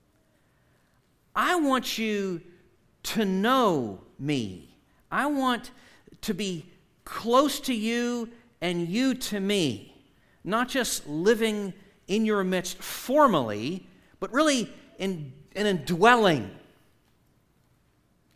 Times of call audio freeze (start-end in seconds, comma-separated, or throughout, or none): none